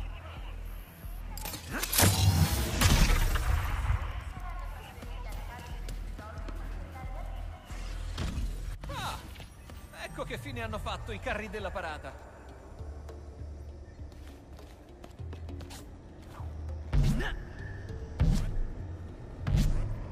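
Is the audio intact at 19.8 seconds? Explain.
Yes, the audio is intact at 19.8 seconds, with no fault audible at that moment.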